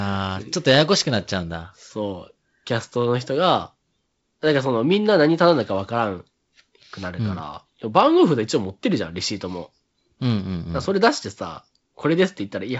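Speech carried over G.722 wideband telephone coding at 48 kbit/s shows no technical fault, with its band ending near 7.7 kHz and only the light coding texture expected of that rate.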